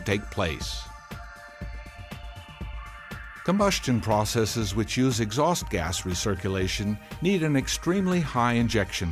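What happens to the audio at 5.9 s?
Nothing goes wrong at 5.9 s; the audio carries on intact through that moment, with no dropout, click or distortion.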